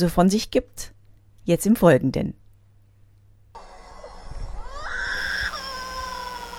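At 5.17 s a mains buzz starts and runs to the end of the clip at 6.59 s. It is a steady, raspy buzz built on 60 Hz. Sharp switching spikes from a dimmer, rectifier or unshielded cable get into the signal path twice per mains cycle, so the buzz repeats at 120 Hz, with harmonics reaching up to several kilohertz. It sits roughly 20 dB below the wanted sound.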